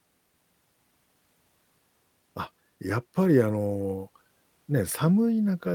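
No technical faults are audible anywhere in the speech.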